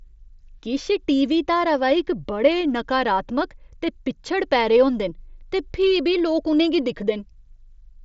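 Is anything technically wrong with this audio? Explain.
No, nothing is technically wrong with this audio.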